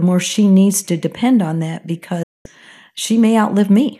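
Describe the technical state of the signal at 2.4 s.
At 2.4 s the signal is inside a digital broadcast dropout, running from 2.23 to 2.46 s, just after "to depend on that". The receiver lost valid frames and muted. The speech fades out over about 8 ms, leaving roughly 216 ms of silence.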